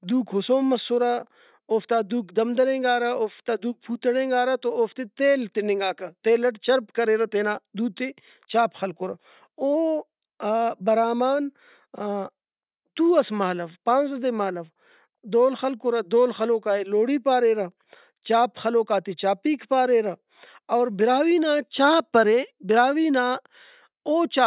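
No technical faults are audible.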